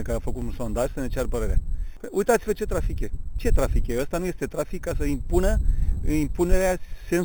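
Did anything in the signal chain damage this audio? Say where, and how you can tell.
Yes. The damage is at the rate-conversion stage: a metallic fizz sits across the whole clip, about 21 dB under the signal, with the first mirrored copy filling 4 to 8 kHz. That's imaging from sample-and-hold upsampling, which fits an 8 kHz source raised to 44.1 kHz by repeating samples with no smoothing filter.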